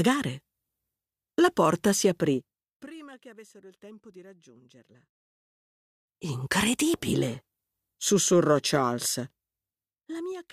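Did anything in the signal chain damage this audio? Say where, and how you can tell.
Yes. Zipper noise from a stepped gain control at the processing stage. Fades at 2.32–2.90 s (down about 25 dB), 5.75–6.35 s (up about 25 dB) and 9.02 s to the end (down about 20 dB) tick audibly. The level jumps in 2 dB steps, roughly 30 per second, then about seven, each one clicking.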